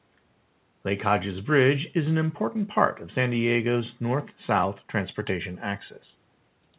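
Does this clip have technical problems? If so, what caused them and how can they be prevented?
No, there is nothing here to fix or prevent.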